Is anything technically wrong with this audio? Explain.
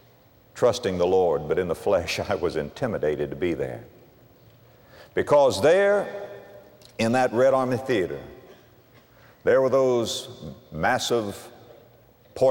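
No, nothing here stands out as technically wrong; it all sounds just as it should.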